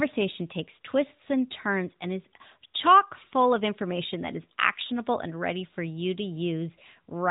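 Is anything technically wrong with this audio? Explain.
No, nothing is technically wrong with this audio.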